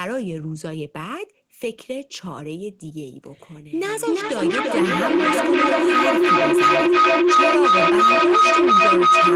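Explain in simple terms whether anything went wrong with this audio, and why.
Something went wrong: from 3.84 s to the end, a feedback howl takes over the speech. A microphone and loudspeaker are feeding each other in a loop that gets louder each pass, settling into a shrill tone around 1.5 kHz that pulses roughly every third of a second.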